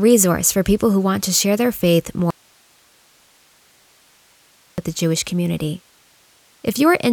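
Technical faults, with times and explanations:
2.31–4.78 s, audio dropout to a faint residue: right after "to share their faith" the speech cuts off abruptly for about 2.47 s, leaving only hiss some 35 dB down, likely from a lost feed into a path that stayed live. A pause or fade would not end this suddenly or leave steady hiss.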